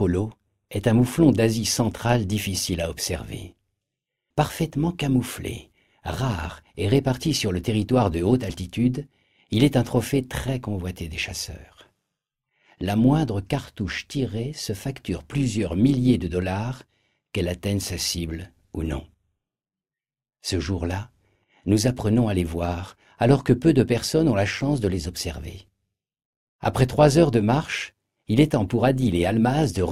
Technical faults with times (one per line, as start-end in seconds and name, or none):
0.00-29.92 overlap-add ripple